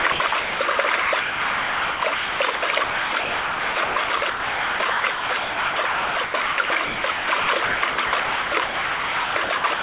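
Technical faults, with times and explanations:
Throughout: sound chopped by the voice detector; about 6.5 s gated to synthetic noise, likely comfort noise, showing as abrupt waveform cuts and featureless spectrogram patches.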